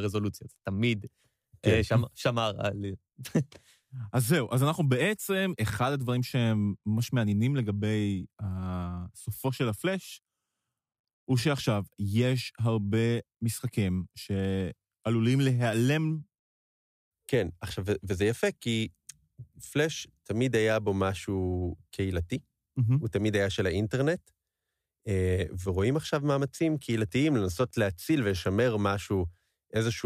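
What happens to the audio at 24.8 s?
Nothing goes wrong at 24.8 s; the speech runs through that moment intact, with no dropout, click or distortion.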